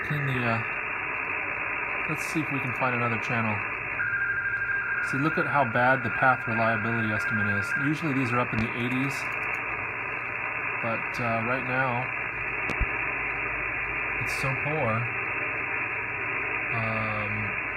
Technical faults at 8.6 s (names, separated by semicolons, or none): loud pop